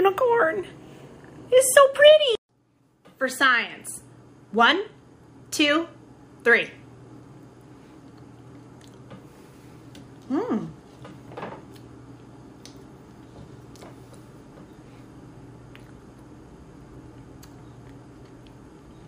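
No technical faults are audible anywhere in this audio.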